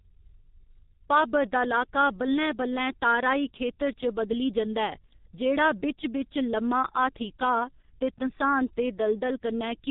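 From start to finish, the speech carries heavy G.723.1 codec damage. This early telephony codec squeezes audio to around 6 kbit/s in 30 ms frames. Nothing above 4 kHz survives. The voice sounds muffled and hoarse. Consonants smear together.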